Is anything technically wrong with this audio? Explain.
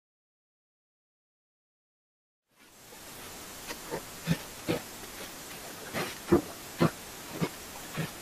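Yes, the speech carries two technical faults, one throughout and one in three short bursts.

Throughout the clip, the speech sounds dull and gurgling, with a granular roughness, likely from MP2 compression at a low bitrate, around 80 kbps. With too few bits, the encoder drops whole upper sub-bands and coarsely quantises the rest. On a spectrogram, the top end is cut off and flickers in blocky patches.

DAB burbling appears from 2.72 to 3.41 s, 4.56 to 5.54 s and 6.97 to 7.49 s, as burbling noise over the speech. Bit errors, at a rate well under one percent, slip past error correction and corrupt samples, putting short blips of noise in single sub-bands. A spectrogram shows isolated bright horizontal dashes in narrow bands. The first burst overlaps a clean fade-in that ends about 3.4 s.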